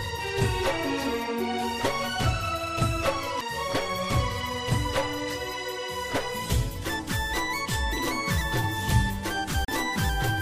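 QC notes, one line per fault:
3.41 s, CD skip: a very brief mute of a few milliseconds, then the sound resumes from a different point on the disc's spiral. Unlike a plain dropout, nothing is simply missing; the material jumps forward or back by one or more disc turns.
9.65 to 9.68 s, CD skip: a longer mute of roughly 40 ms. The laser lands on another turn of the spiral, so the sound picks up displaced in time rather than continuing where it stopped.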